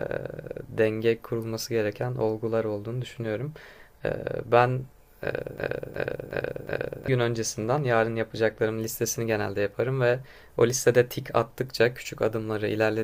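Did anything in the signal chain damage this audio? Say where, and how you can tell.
Yes. From 5.58 s to 7.08 s the speech turns into a broken-record loop: one fragment of about 365 ms plays four times back to back, each repeat identical, and then normal audio resumes. The exact repetition and the abrupt re-entry point to a playback or streaming buffer that likely stalled and kept replaying the last block it held. Whatever should have been heard during those 1.5 seconds is missing.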